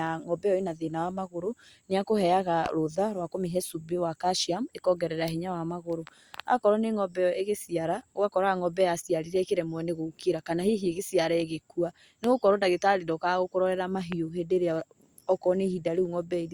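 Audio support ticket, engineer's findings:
Loud pop at 2.66 s after "magũrũ nĩakũheaga", then 12.24 s and 14.12 s. Each is one sharp spike well above the speech. Likely a plug or static voltage transient.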